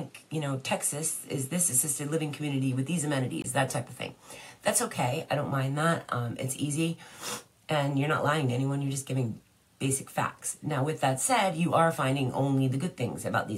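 From the start to 3.44 s the input was likely switched to a poorer device. Nothing reaches above 13 kHz, with a background noise some 30 dB down, so the sound is duller. At 3.44 s a 20 ms silence marks the change back to fuller sound, with no level jump.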